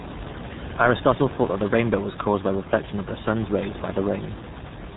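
From start to finish the speech passes through the RealAudio 14.4 codec, and it is heavily damaged. Everything above 3.8 kHz is gone, and the voice comes out muffled and gargly, which points to a bitrate of about 8 kbit/s. The room noise sits about 12 dB below the speech.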